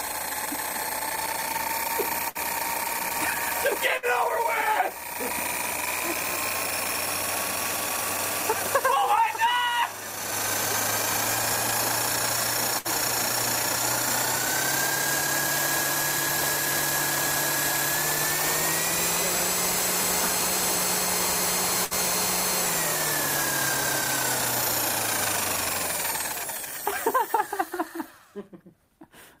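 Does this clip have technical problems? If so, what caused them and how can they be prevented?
Yes. Bursts of packet loss at 2.29, 3.97, 12.79 and 21.85 s made the receiver hold and fade the last sound for 55 to 60 ms, then skip 60 ms of audio. Forward error correction, a larger jitter buffer or a more stable network path would prevent this.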